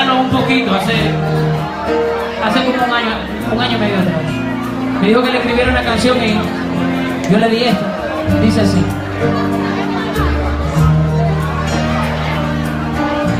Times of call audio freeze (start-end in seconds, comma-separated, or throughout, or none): none